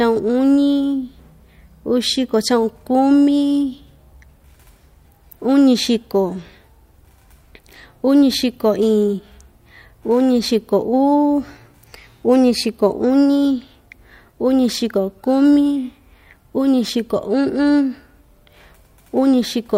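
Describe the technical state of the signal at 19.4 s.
At 19.4 s the signal is intact, with no audible technical fault at that point.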